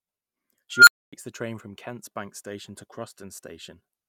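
An unstable filter takes over the speech at 0.73 s. A recursive filter with bad coefficients feeds its own output back with growing gain, so a squealing tone around 1.5 kHz swells from nothing to clipping in about 140 ms. The values then overflow and the signal collapses into about 255 ms of silence until the filter resets, with the whole disruption running to 1.13 s.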